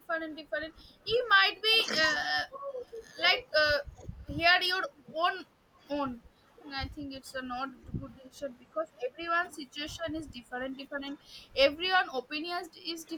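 The speech keeps dipping, from 0.07 to 2.76 s, then 3.85 to 4.17 s, 4.88 to 5.14 s, 6.33 to 6.49 s, 7.36 to 7.96 s, 9.13 to 11.2 s and 11.92 to 13.08 s, dropping by about 10 to 25 dB. That's likely speech suppressed in double talk: the echo canceller turned down this side while both parties spoke.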